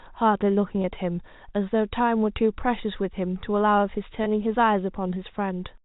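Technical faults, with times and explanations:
0.82 to 0.84 s and 4.24 to 4.26 s, packet loss with pitch repetition: Each time about 20 ms of speech goes missing, which fits a single lost packet. The receiver fills the hole by repeating the last pitch period it heard. That briefly holds the voice on one steady, slightly buzzy tone. The gap is short, so there is no fade to silence. The speech resumes almost at once. The G.711 telephone band stays audible across both gaps.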